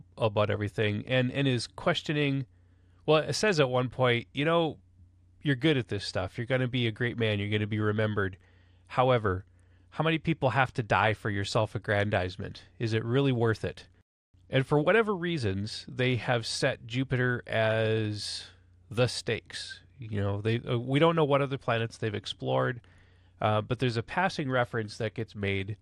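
Throughout the speech, the sound is dull, with a gurgling, granular grit, the mark of MP2 compression, likely at a rate near 80 kbps that starves the upper sub-bands of bits.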